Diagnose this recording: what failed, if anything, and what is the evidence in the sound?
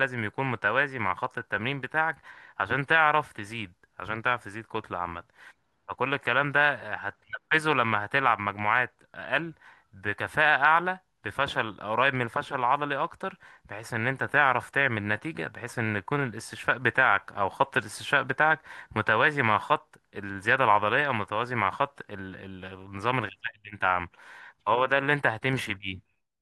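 Sample clock jitter runs throughout the speech, a faint hiss that swells on loud and sibilant passages and disappears in pauses. The converter's unsteady clock, wandering around half a microsecond, mistimes samples, so fast-changing waveform slopes pick up error roughly 50 dB down.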